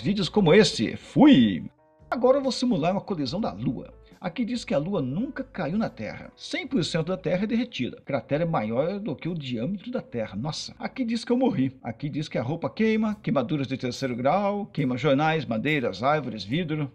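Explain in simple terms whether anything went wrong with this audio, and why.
Nothing went wrong with this audio that a listener can pick up. The sound carries on steadily, with nothing interrupting or disturbing it at any point.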